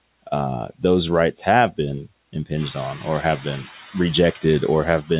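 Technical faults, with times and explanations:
Throughout: noise suppressor artifacts. The suppressor treats the steady background as noise and pulls it down by about 19 dB in the gaps, so it drops out between phrases and comes back under speech. The effect is clearest once the room noise rises by about 11 dB around 2.5 s.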